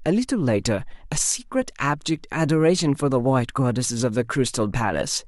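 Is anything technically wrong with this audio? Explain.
No, nothing technically wrong can be heard here.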